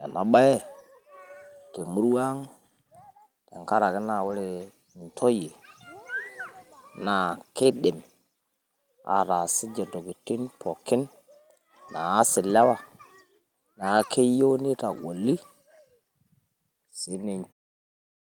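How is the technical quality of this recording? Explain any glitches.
The recording has one recurring glitch, a lost packet rebuilt from error correction, heard seven times. Near the end the level fades out smoothly from roughly 17.5 s to 17.53 s.

Lost packet rebuilt from error correction occurs at 0.59–0.61, 4.23–4.33, 7.63–7.65, 9.41–9.43, 12.61–12.63, 13.97–14.03 and 14.89–14.99 s. Each time packets went missing, and the decoder played the low-bitrate backup copy carried in the following packet. The 20, 40 and 60 ms patches fit one, two or three lost 20 ms frames. There is no gap, just brief rougher, noisier sound.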